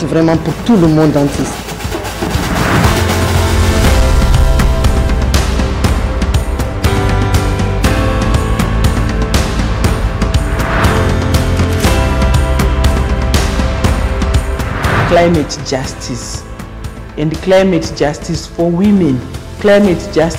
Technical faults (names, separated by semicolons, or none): hard clipping